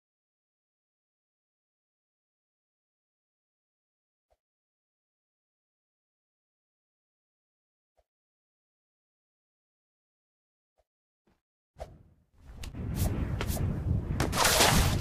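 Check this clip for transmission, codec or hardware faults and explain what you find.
One hardware-side fault is present. At 12.62 s, an underrun with held sample: the output buffer empties for about 5 ms, the converter holds its last value, and the waveform shows a flat segment. The sound stops abruptly, then resumes where it left off with only a soft edge.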